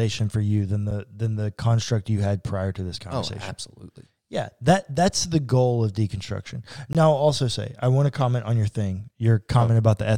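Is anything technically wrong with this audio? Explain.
Yes. This speech clip has two instances of a gap between stream segments: a brief dropout at 0.91 s and another from 6.93 to 6.95 s, six seconds apart, which matches 6-second segment boundaries. Where consecutive segments' timestamps don't meet, playback inserts silence, adding about 8 ms and 18 ms respectively while losing no audio. Each is heard as a sharp, clicky break. On a waveform it shows as a flat line with abrupt edges, and on a spectrogram as a thin, clean vertical blank stripe across all frequencies.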